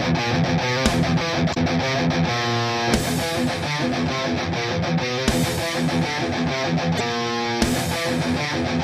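Damaged data in a compressed stream causes short glitches at 1.50–1.57 s and 6.97–7.01 s, where the decoder loses frame sync.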